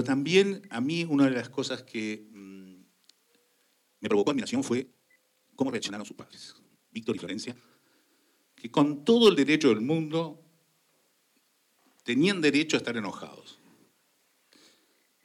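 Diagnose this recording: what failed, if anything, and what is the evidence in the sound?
From 3.80 to 7.56 s the pace abruptly doubles while pitch holds steady, sounding rushed. That points to a time-stretched section, likely software squeezing the audio by dropping short slices. Unlike a sample-rate or playback-speed error, nothing rises in pitch.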